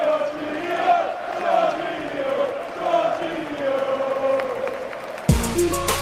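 Nothing in the audio stands out as a technical fault; it all sounds just as it should.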